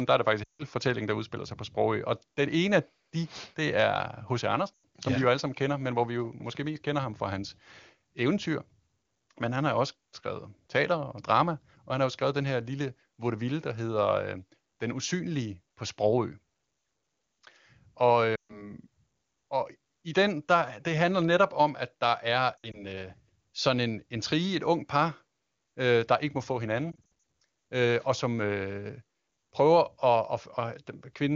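Lost AMR speech frames break up the speech five times. At 0.44 to 0.63 s, between "der er det" and "fortællingen der udspiller sig", about 160 ms is concealed. The decoder repeats the last good pitch and vocal tract settings at falling gain, so the sound drops to near silence within two frames. At 4.74 to 4.84 s, before "som ja vi jo", a 100 ms gap does the same. At 18.35 to 18.73 s, 140 ms drops to near silence. From 22.58 to 22.84 s, 80 ms of scattered losses, the longest 60 ms, give repeated dips. After "der ikke må få", at 26.91 to 27.09 s, 160 ms of scattered losses (runs up to 60 ms) cause repeated dips. After each gap the speech returns briefly weak or rough. The AMR wideband (HD Voice) codec around these gaps stays clean, which fits its highest bitrate.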